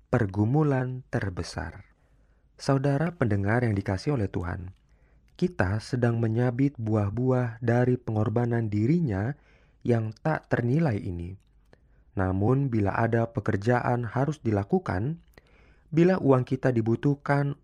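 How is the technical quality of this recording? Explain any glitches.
The speech has three brief glitches from damaged data in a compressed stream, at 3.07, 7.13 and 12.47 s. Corrupted bytes make the decoder misread frames and lose sync until it finds the next frame header, producing a short chirp or blip each time.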